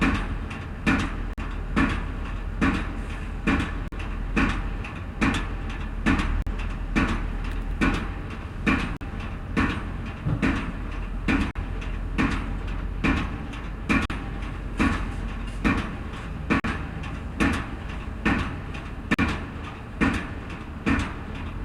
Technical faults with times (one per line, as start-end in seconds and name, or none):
1.33-1.38 gap between chunks
3.88-3.92 gap between chunks
6.42-6.47 gap between chunks
8.97-9.01 gap between chunks
11.51-11.55 gap between chunks
14.05-14.10 gap between chunks
16.60-16.64 gap between chunks
19.14-19.19 gap between chunks